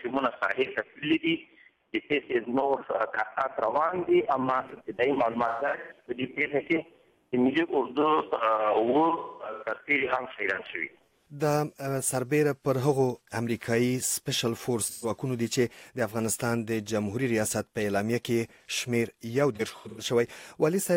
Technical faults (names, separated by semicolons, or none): AAC frame loss with concealment